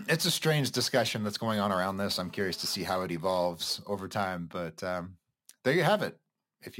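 Right after "going on around this", from 2.23 to 3.07 s, there's a GSM phone buzz: a nearby handset on a call pulses at about 217 Hz, and the audio circuit rectifies it into a steady, raspy, harmonic-rich buzz, sitting about 28 dB under the speech, ending before "evolves over time but".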